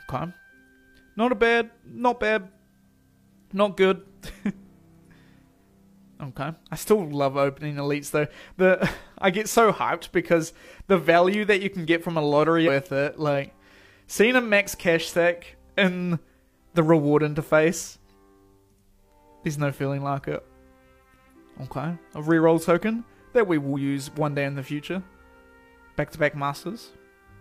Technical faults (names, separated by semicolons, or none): electrical switching spike